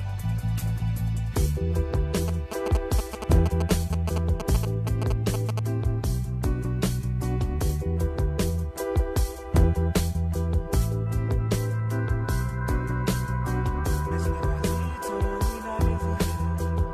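From 2.28 to 5.59 s, GSM signalling bursts break in. A nearby 2G phone is exchanging brief control traffic with the network, sending its radio energy in short groups rather than continuously. The audio circuitry picks up that radio field and rectifies it into sound. The result is a galloping dit-dit-dit of short buzzes, pulsing at 216.7 Hz. It sits only slightly below the main sound, roughly 5 dB down.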